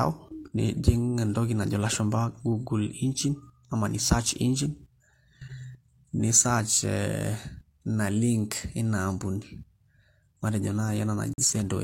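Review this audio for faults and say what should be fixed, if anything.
A corrupt frame muted fault hits near the end, from 11.34 to 11.44 s. The speech drops abruptly into silence for about 0.11 s, then resumes. The gap's length points to a single lost frame. Bits inside that compressed frame were flipped. The decoder rejected it, and the player filled the slot with silence. The timeline stays intact, so nothing shifts afterwards. Adding error-resilient transport or concealment that interpolates lost frames instead of muting them would prevent this.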